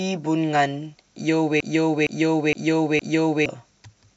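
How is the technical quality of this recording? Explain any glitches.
The recording has one clear glitch. Broken-record loop, 1.60 to 3.46 s: a 0.46 s fragment of the speech repeats exactly, back to back, four times. The stream likely stalled and kept replaying its last held chunk, so the speech belonging to that stretch is missing.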